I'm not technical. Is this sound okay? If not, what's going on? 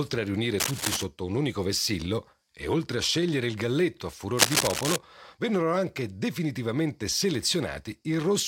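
No. Cable scratch noise at 0.58–1.05 s and 4.36–4.98 s: a scratchy rustle over the speech, likely from a worn cable or plug being moved and briefly losing contact.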